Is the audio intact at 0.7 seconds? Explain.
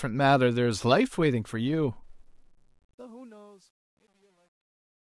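Yes, the speech at 0.7 seconds is intact, with no fault at that moment.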